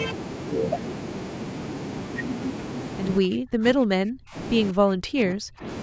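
Speech clip with two stretches of heavy dropout, from 3.2 to 4.36 s and from 4.71 to 5.66 s, falling by about 40 dB and 35 dB, the likely cause being speech suppressed in double talk, where an echo canceller mistakes the talker's speech overlapping far-end audio for echo and attenuates the talker.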